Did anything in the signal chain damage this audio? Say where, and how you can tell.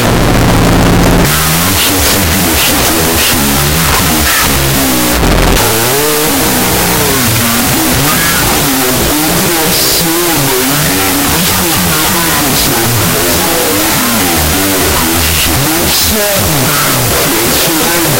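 Yes: loud noise buries the sound throughout, at half speed and an octave low. Wrong sample width in sample-format conversion: 16-bit data read as unsigned 8-bit.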